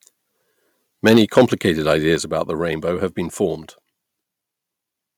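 Microphone overload from 1.06 to 1.42 s gives this speech a harsh, crackling edge: peaks run about 8 dB past the converter's ceiling and roughly one sample in twenty is flattened, likely from input volume set too high. Microphone volume stepped down at 1.17 s and again at 2.16 s, dropping speech and background together by about 3 dB and then about 4 dB, likely the sound of the call software reacting to the clipping by cutting the device's input level in single steps.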